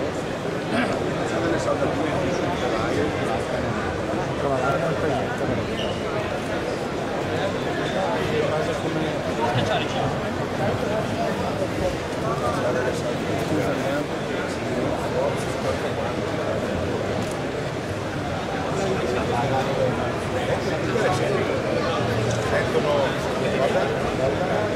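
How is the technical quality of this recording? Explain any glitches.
No glitches turn up anywhere in this recording. The sound runs continuously with no interruptions or disturbances to point to.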